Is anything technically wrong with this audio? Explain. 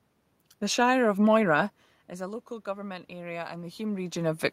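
Yes. From 2.17 s to 4.5 s the speech and the room noise behind it swell upward together, slowly, by about 6 dB, so the background noise climbs along with the voice rather than staying put. This is automatic gain rising: the input had dropped by about 15 dB, and the gain control, judging the level too low, ramped its gain up gradually to compensate. The level changes near 1.5 s and 4.0 s sound like the talker moving relative to the microphone.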